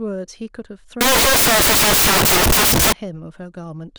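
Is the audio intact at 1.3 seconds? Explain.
No. At 1.3 seconds the speech sits inside a stretch of samples built from the wrong bytes, running from about 1.01 to 2.93 s. Across this span each sample is assembled incorrectly, with its bytes misaligned or put in the wrong order. The rapidly changing low-order bits end up as the large part of every value. The result is loud, harsh broadband noise instead of speech.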